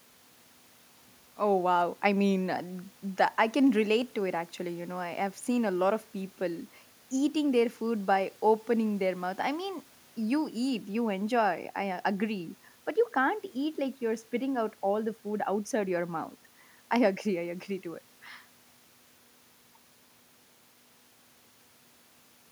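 No technical faults occur anywhere in the speech, so there is nothing to describe in time order.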